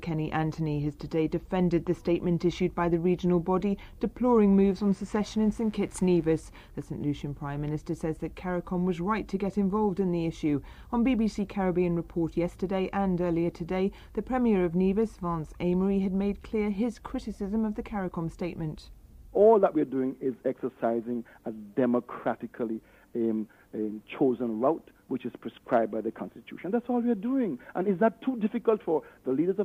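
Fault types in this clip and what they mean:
Mains buzz: switching spikes from a dimmer, rectifier or unshielded lead, repeating twice per 60 Hz cycle, add a raspy buzz from 4.67 to 6.40 s, well below the main sound. Unlike a smooth hum, its harmonics climb into the kilohertz range.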